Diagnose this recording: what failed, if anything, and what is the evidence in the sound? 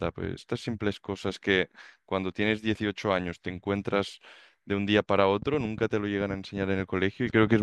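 A train of clicks runs from 5.42 s to 7.57 s, about 15 clicks at roughly 7.5 per second, spaced unevenly. The clicks share much the same shape and stand out over the speech, peaking around 5 dB above it. The likely cause is electrical interference from nearby equipment coupling into the analogue wiring, or a faulty connection or power supply.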